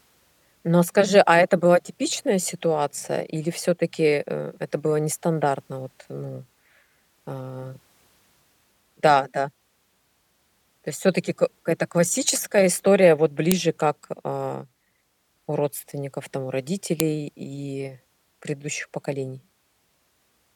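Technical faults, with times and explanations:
13.52 s and 17.00 s: file header played as audio. A sharp, loud click lands at each point, first just after "это классическая история вот", then just after "у родственников там у". Each is a single instant, about a millisecond long. Separate pieces of audio were joined with their file headers left in place. Those header bytes were read as sample values. They bear no relation to the speech, so each piece starts with a snap.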